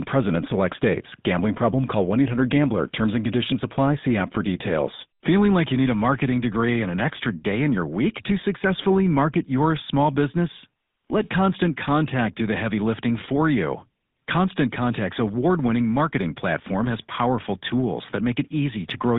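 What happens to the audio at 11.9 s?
At 11.9 s the speech carries GSM full-rate codec damage, present throughout: pulse-excited vocal-tract modelling, consistent with 13 kbps, gives a buzzy, gravelly roughness, unlike plain 150 Hz to 3.7 kHz band-limiting.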